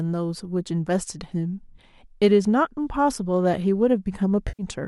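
At 4.48 s the speech breaks into a smeared, noisy patch that lasts until about 4.63 s. This is AAC frame loss with concealment. Around 110 ms of coded audio never reached the decoder, which fits a run of roughly ten-millisecond frames, as the likely low-delay AAC compression would use. The decoder filled the gap by reusing the last good spectrum. It scrambled the phase and guessed the energy. The result sounds hazy and phasey rather than silent.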